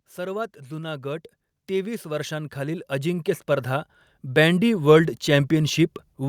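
From 0.15 to 4.87 s, speech and background swell together by about 17 dB: automatic gain rising, as the control slowly lifts a too-quiet input.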